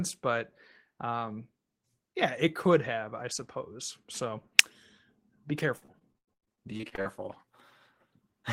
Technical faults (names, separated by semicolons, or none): repeated packet loss (robotic sound)